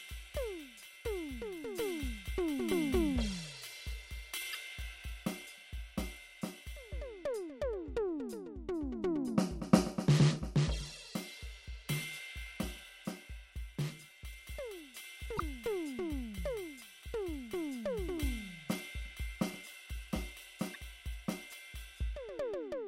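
At 4.51 to 4.56 s, 15.35 to 15.40 s and 20.70 to 20.76 s, damaged data in the compressed stream makes the decoder lose frame sync, producing a brief chirp, squawk, click or short hole each time.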